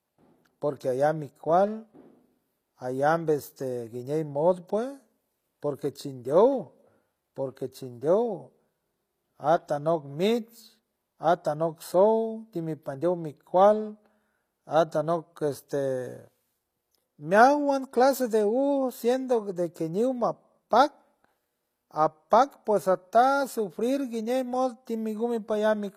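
Speech with plainly audible HE-AAC compression damage throughout: the top end looks bright but isn't real, s sounds come out gritty and lispy, and nothing reaches above about 14.9 kHz. The likely cause is spectral band replication at a low bitrate, around 24 kbps.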